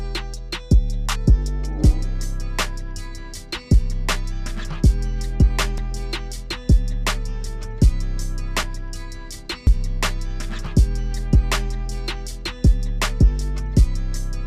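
At 5.78 s, 9.67 s and 10.66 s the sound jumps ahead with no gap, losing about 20, 30 and 10 ms respectively. This is likely a dropped buffer (overrun): samples were overwritten before being read, so the surrounding audio was spliced together.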